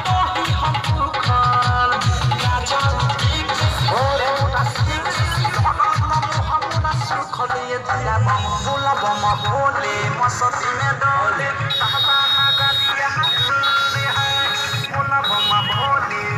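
At 9.30 to 9.32 s a brief chirping blip of noise cuts across the sound, loud, peaking around -10 dBFS. This is a corrupt frame decoded: flipped bits in a few compressed frames were played anyway, so misread gains and codes scattered energy into wrong frequencies.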